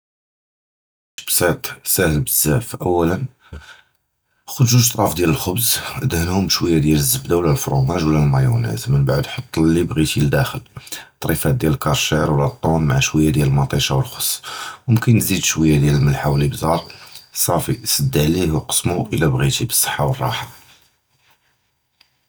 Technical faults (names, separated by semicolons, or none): cut-off start